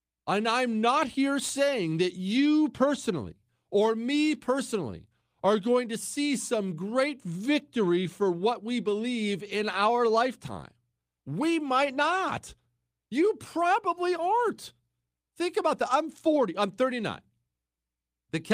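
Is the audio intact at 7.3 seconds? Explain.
Yes, the speech at 7.3 seconds is intact, with no dropout, click, distortion or other fault audible at that moment.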